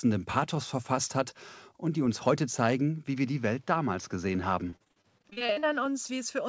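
Speech, carried over a wideband call link whose top end stops at 8 kHz, which fits a 64 kbps G.722 codec. From 3.07 to 5.86 s the band narrows to nothing above 6.6 kHz with no gap and no level jump, most likely an input switched to a poorer device. A codec change would not bring the fresh noise floor, about 40 dB down. From 4.70 to 5.65 s repeated packet loss gives robotic, choppy sound: a dozen or more holes up to 39 ms each, together covering about 39% of that stretch. They are patched, not silent, which separates them from plain dropouts. At 6.07 to 6.11 s a short concealed packet loss leaves a single 20 ms smear, one isolated event rather than a run.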